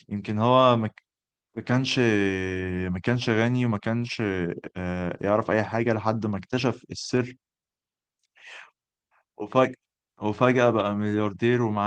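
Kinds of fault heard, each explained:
Lost packet rebuilt from error correction: the decoder filled each loss with a low-bitrate copy carried in the following packet, so the speech never drops out but briefly turns rougher and noisier. This happens at 0.61 s, 1.71–1.85 s, 3.15–3.17 s, 3.99–4.05 s, 7.17–7.27 s and 10.79–10.89 s. The rebuilt stretches run 20 to 80 ms, consistent with one to four separate 20 ms packets lost.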